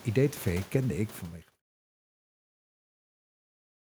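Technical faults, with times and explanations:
No technical faults are present.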